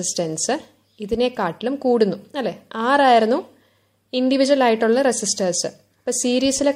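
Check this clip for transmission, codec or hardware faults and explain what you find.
No transmission, codec or hardware faults can be heard anywhere in the clip. Nothing in the sound calls for further explanation.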